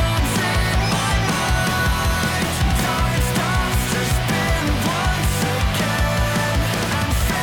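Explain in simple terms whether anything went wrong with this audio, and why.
Nothing stood out as going wrong when listening to this audio.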